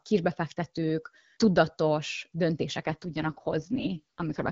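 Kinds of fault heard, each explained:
AMR rate drop: From about 2.79 s, right after "kisbefektetők tudatos", the speech turns rough, buzzy and more synthetic through to the end, with no gap and no loss of bandwidth. The roughness fits the AMR-WB codec stepping down from 12.65 kbit/s, where the first part is clear, to its 6.6 kbit/s mode, most likely because the link weakened and bits shifted from coding the speech to protecting it from errors.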